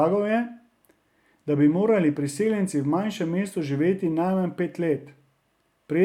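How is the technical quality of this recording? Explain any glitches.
The recording has one fault, sample clock jitter, from 3.98 s to the end at 6.05 s. The converter's clock wanders by around a microsecond and a half, so samples land slightly early or late. This adds a faint hiss, roughly 50 dB below the speech, that roughens the louder and brighter sounds.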